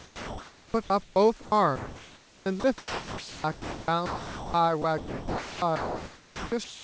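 From 0.00 to 1.16 s, 1.42 to 4.54 s and 4.82 to 6.84 s, sound chopped by the voice detector, likely gating, swaps speech edges for a steady comfort-noise hiss, not the silence or repeats of packet loss.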